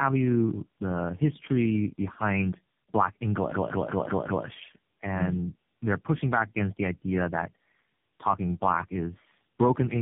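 Tandem speech coding runs through the whole clip. The speech sounds rough, muffled and warbly, with nothing above 3.7 kHz. That fits three speech codecs in a row, likely AMR-NB and GSM full rate. Each re-encode built on the last one's damage.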